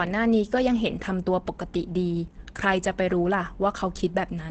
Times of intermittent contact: none

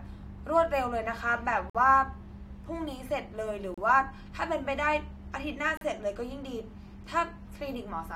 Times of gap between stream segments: 1.70-1.75, 3.74-3.78, 5.77-5.81

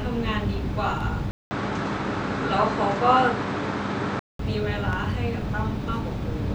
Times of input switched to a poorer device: 1.31-4.39

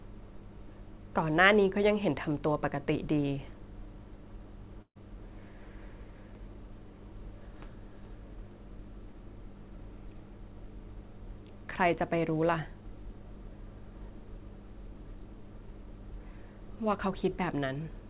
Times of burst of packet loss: 4.82-4.97

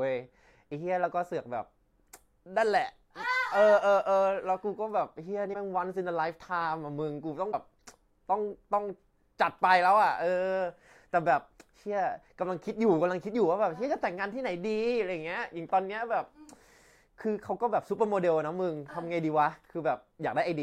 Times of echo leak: none

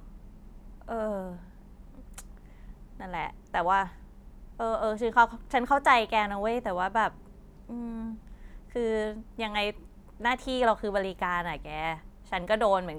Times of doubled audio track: none

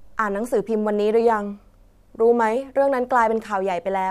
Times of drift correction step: 1.21-2.56

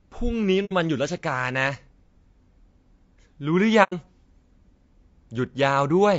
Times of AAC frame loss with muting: 0.65-0.72, 3.83-3.93

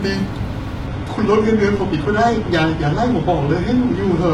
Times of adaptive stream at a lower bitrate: 0.87-4.33

